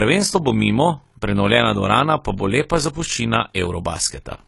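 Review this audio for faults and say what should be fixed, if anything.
Throughout the speech, the sound is dull and smeared, with a fizzy, warbling texture on sibilants. The cause is likely AAC compression, with a low rate that fits 32 kbps AAC-LC cutting the high band and coarsely quantising what remains. Encoding at a higher bitrate, or keeping an uncompressed master for delivery, would prevent it.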